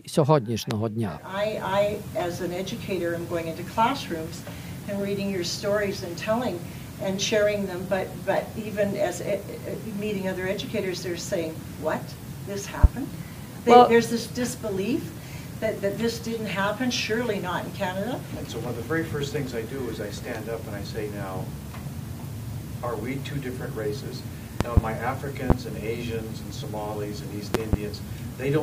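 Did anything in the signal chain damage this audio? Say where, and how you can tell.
Yes: loud pops, roughly 20 to 25 dB above the sound, at 0.71–0.74, 12.84–12.87 and 25.50–25.53 s, and in quick pairs at 24.61–24.80 and 27.55–27.76 s. The sound carries on underneath each one, so these are likely voltage spikes in the analogue wiring.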